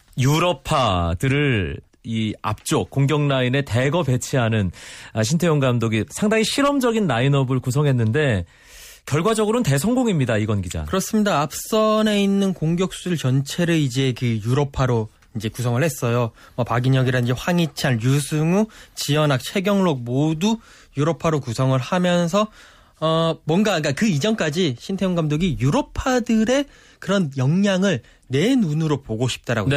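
Speech recording; no technical faults are audible anywhere.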